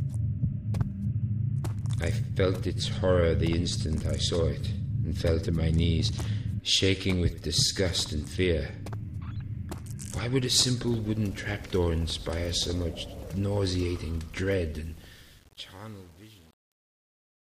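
From 14.83 s to the end at 17.50 s, the closing fade goes gritty and grainy, and from about 14.9 s onward it is at its worst. This is truncation distortion on a fade. The gain stage discards low-order bits without dither, which fits roughly 8-bit resolution, so the waveform collapses into a few coarse square steps as it approaches the smallest level.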